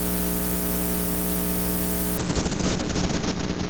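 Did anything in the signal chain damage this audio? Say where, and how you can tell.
Yes: a call bitrate drop in the codec stage. From 2.2 s to the end, the encoder falls from 32 to 7 kbps and the top band shrinks from 20 kHz to 8 kHz, so the sound turns coarse and muffled, with the lowest rate held for 1.17 s. Unlike packet loss, there are no gaps.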